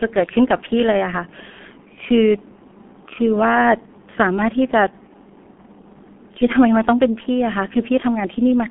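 From start to finish the speech carries the signature of the G.723.1 codec, and the coding damage is heavy. Nothing above about 3.7 kHz survives, and the low end is thinned, consistent with a 200 Hz to 3.4 kHz telephone line. The coarse, hoarse texture and smeared consonants point to the codec's rate, around 6.3 kbit/s, where long frames and a slowly updated voice model blur quick changes in the speech.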